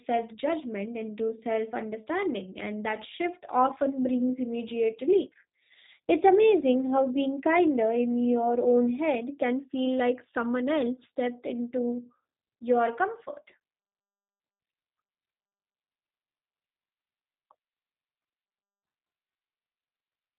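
From start to finish the speech sounds rough, slightly buzzy and synthetic, with a dull, muffled top: nothing comes through above about 3.8 kHz, so the sibilants lose their crispness. This is plainly audible G.729 codec damage. The speech has been rebuilt from a vocal tract filter, a pitch predictor and a few pulses per short frame, not carried as a waveform. The coarseness fits a low-rate VoIP setting of around 8 kbit/s.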